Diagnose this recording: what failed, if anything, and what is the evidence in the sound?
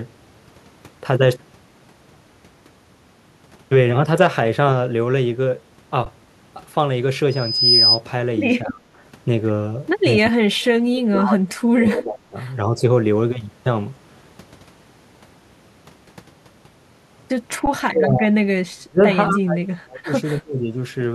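Driver or buffer stage: underrun with held sample at 6.05 s and 17.66 s. The sound freezes flat for about 12 ms, which fits a 512-sample buffer. It resumes softly, with nothing skipped.

Acoustic loop through the analogue path: loudspeaker feedback squeal from 7.3 to 8.0 s. A 5 kHz tone swells within half a second, reaching about 5 dB above the speech.

Call processing: speech suppressed in double talk at 8.65–8.84, 10.22–10.66, 11.06–12.37, 12.67–12.82, 17.88–18.37 and 18.74–20.76 s. The speech dips by up to about 35 dB. The likely cause is the echo canceller ducking during overlap.

Call processing: echo leak at 10.96–11.01 s. A scrap of speech returns 239 ms late, about 15 dB down, likely from residual loudspeaker echo the canceller missed.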